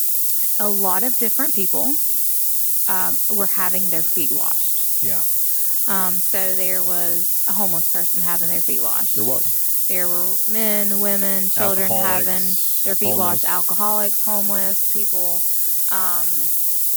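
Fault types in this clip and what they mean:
Low bit depth with noise shaping: the speech is stored with only 3 bits, and the rounding error is fed back and pushed upward in frequency, so a steady, thin hiss runs throughout, rising sharply toward the top of the band and sitting not far below the speech level.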